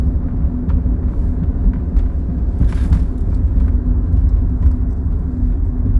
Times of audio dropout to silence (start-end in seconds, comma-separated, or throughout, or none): none